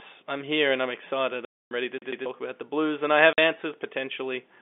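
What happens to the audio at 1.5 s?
The speech drops out completely from 1.45 to 1.71 s, a 260 ms gap between "here and I'm excited" and "ready to". This is packet loss filled with silence: lost packets were replaced with nothing, and the gap's length fits a run of 10 ms packets.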